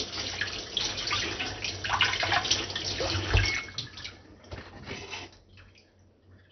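From start to finish the audio has a dull, gurgling quality, with nothing above about 6.2 kHz and a grainy, bubbling roughness on what's left. That's the signature of likely MP2 compression squeezed hard, which fits a rate somewhere around 48 kbps. Layer II runs out of bits for its 32 sub-bands, so the top bands get shut off entirely, some flicker in and out, and the surviving ones are quantised so coarsely they churn.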